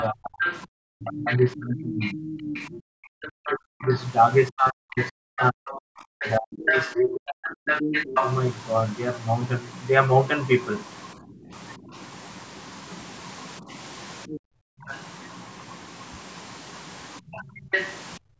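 From 0.0 to 8.34 s, the other side's voice is leaking through only about 5 dB below the talker, likely loudspeaker echo that the canceller left behind. Across nearly the same span, 0.1 to 8.15 s, speech is suppressed in double talk: the talker drops away in pieces by as much as roughly 40 dB, likely the canceller turning both voices down while both sides speak. Shorter suppressions follow at 11.18 to 11.93 s, about 15 dB deep; 13.6 to 14.9 s, around 40 dB; and 17.2 s to the end, around 35 dB. Leakage returns at 14.3 to 14.95 s, fainter at about 15 dB down, and at 17.32 to 17.94 s, about 5 dB down.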